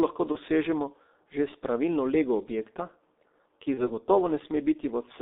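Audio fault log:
throughout: G.723.1 codec. The whole clip has that heavy, low-rate internet-telephony sound. The band sits between about 250 Hz and 3.7 kHz, so the speech is muffled and thin at the bottom. The hoarse, grainy texture and smeared consonants point to a coder running around 6 kbit/s, working in 30 ms frames and updating its voice model too slowly to follow quick changes. The codec damage here is heavy.
0.32–0.37 s and 3.74–3.89 s: VoIP packet loss concealed by the speech codec. Each spot sounds like a single missing 30 ms frame. The decoder filled the gap by carrying forward its last pitch and filter settings while turning the level down, so you get a brief stretched, fading fill instead of a hard dropout. Because each frame builds on the one before, the voice stays off after the gap, briefly in the first case and for about 110 ms at 3.74 s.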